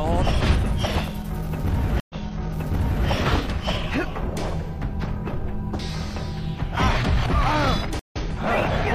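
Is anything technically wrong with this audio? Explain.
Yes. Two stream reconnects occur, at 2.0 s and 7.99 s. Each time the connection drops, leaving 95 ms and then 120 ms of silence, before a fresh decoder resumes 0.98 s and 0.09 s earlier. The sound repeats rather than skipping ahead, which sets it apart from a plain dropout.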